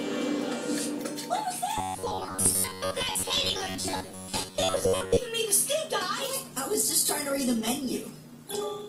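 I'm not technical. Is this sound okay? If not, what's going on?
No. Robotic sound from repeated short buffers runs from 1.78 to 5.18 s: the audio turns into a rigid, metallic buzz at about 94 Hz. This is likely because new audio arrived too slowly, so the player kept looping the last 11 ms or so, replacing most of the real sound.

An adaptive stream at a lower bitrate takes over at 6.20 s and lasts to the end. The connection seems to have slowed, so the player switched to a much lighter version of the stream. Compression artefacts rise, abruptly and without any gap.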